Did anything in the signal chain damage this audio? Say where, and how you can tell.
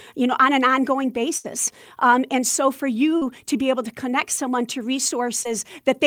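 Yes, the damage is in the network stage. There is a burst of packet loss from 1.37 to 1.46 s in this speech. About 60 ms of audio never arrived in time, so the receiver extended the last sound it had for roughly 66 ms and faded it down. That produces a held, decaying stretch in place of real speech. When the stream picks up again, the audio in between is gone, and the jump forward gives it away.

The same network stage also causes two cases of short concealed packet loss, at 3.18 to 3.23 s and at 5.43 to 5.47 s. Roughly 40 ms and 20 ms of speech were missing. The decoder patched the holes with about 33 ms and 14 ms of extrapolated signal, built from the preceding sound, then crossfaded back into the real audio. Each patch is heard as a brief smear or wobble in the speech.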